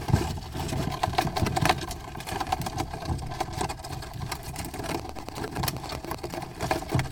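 At 4.90 s a train of clicks begins and runs until 6.35 s, about one and a half seconds of sharp, near-identical pulses arriving at a steady 10.4 per second, around fifteen in all. They sit well above the level of the surrounding sound, so they come across as a distinct mechanical ticking laid over the audio. The regular spacing and uniform shape point to a likely cause in periodic electrical interference or a faulty connection or power supply.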